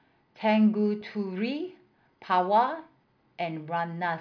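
No technical faults are audible.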